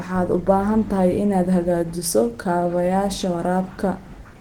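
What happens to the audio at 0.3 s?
At 0.3 s, Opus compression is audible, as it is throughout the clip. The speech sounds hoarse, rough and grainy, which points to a low rate around 16 kbps, likely with the encoder in its hybrid speech mode, filling sparse bands with noise. Content still reaches about 20.2 kHz.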